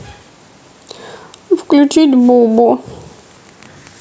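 From the start of the speech to its end there is gain pumping: the level ducks sharply as each loud syllable arrives, with a level swing of around 10 dB. The likely cause is microphone gain set far too high, with a fast limiter clamping it on each peak, leaving loud and soft passages squashed together. Unlike a noise gate, the gain is pulled down rather than cut to silence, all within the call's limited band that stops at 8 kHz.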